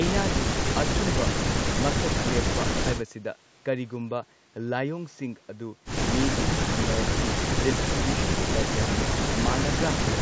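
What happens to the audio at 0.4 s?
Nothing goes wrong at 0.4 s: the speech continues intact there, with only the usual bass trimming and 8 kHz upper limit of call microphone processing.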